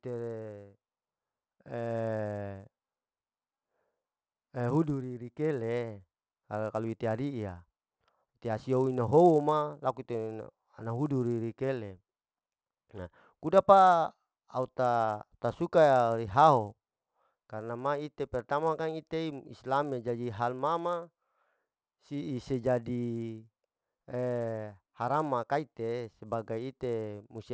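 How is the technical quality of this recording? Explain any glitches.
The recording has one fault, present from start to finish: a resampler restarted on every block. The sample-rate converter, which appears to be going from 24 kHz down to 16 kHz, processed each 10 ms block on its own, with no memory of the neighbouring audio. At every block edge it filled in silence or wrapped-around samples, leaving a small error each time. Those errors repeat 100 times a second, so the speech carries a steady buzz at 100 Hz that rides along whenever sound is present and vanishes in the gaps.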